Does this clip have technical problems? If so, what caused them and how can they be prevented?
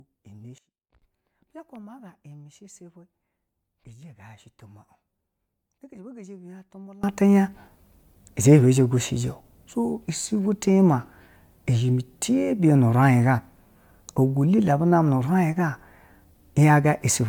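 Yes. Throughout the speech, the sound is swirly, smeared and hollow, with blurred attacks, beyond what a single MP3 pass near 130 kbit/s would explain. The likely cause is generation loss from about four rounds of MP3 decoding and re-encoding, each quantising on a shifted frame grid so the damage compounds. Keep a lossless master and encode only once, at the end.

At 0.58 s the level and background noise drop together by about 21 dB, snapping back at 1.02 s. At 7.04 s they jump up by about 24 dB and stay there to the end. The likely cause is a sudden gain jump, a digital gain change applied between one sample and the next with no ramp. Apply all gain changes with short fades or smoothed gain ramps.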